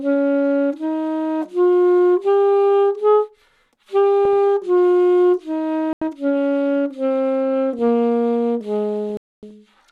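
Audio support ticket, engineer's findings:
Corrupt FLAC frame: brief glitches at 4.25 s (peak about −14 dBFS) and 7.79 s (about −28 dBFS). Damaged frame data decoded unchecked, so prediction runs on wrong values from the damaged bit on, at worst until the frame ends.

Corrupt frame muted: abrupt silent holes at 5.93–6.02 s (86 ms) and 9.10–9.51 s (0.41 s). Decoder rejected damaged frames and the player substituted silence, keeping timing intact.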